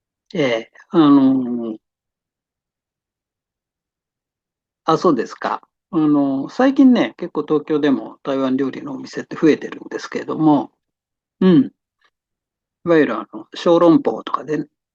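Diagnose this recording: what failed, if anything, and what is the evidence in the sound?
Hard clipping at 4.89, 9.49, 10.50, 13.00 and 13.72–13.86 s: speech peaks barely exceed full scale, up to about 1 dB, at a converter or other stage, flattening tops into brief crackles.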